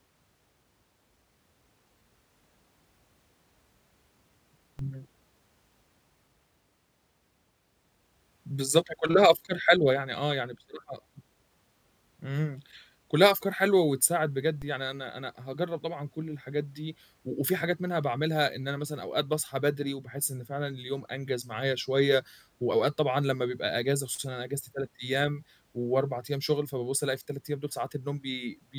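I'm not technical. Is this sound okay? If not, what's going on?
No. There are two DC steps in this speech, at 4.79 s and 14.62 s. At each moment the resting level of the signal, the centre line the waveform swings around, suddenly jumps to a new position. That abrupt shift is heard as a brief low thump or click, while the speech carries on unaffected. After each jump the offset fades back gradually, drained away by a low-frequency filter at about 20 Hz.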